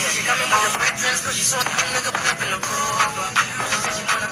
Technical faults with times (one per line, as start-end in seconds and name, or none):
1.58-1.63 damaged data in a compressed stream